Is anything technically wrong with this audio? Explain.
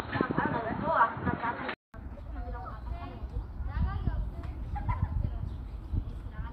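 Yes. From the start to about 1.94 s, the sound is narrow and boxy, with nothing above 4.3 kHz, a new background noise roughly 30 dB under the signal, and no real level jump. A 200 ms gap follows before the full-range sound comes in. That pattern points to a likely input switch to a poorer device: the system was capturing from a lower-quality mic or headset profile, then swapped over.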